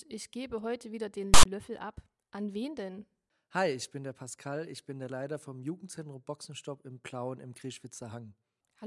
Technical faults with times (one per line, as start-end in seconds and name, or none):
1.34-1.45 file tags played as audio